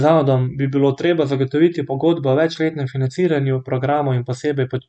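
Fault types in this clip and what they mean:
No technical faults can be heard anywhere in this speech recording.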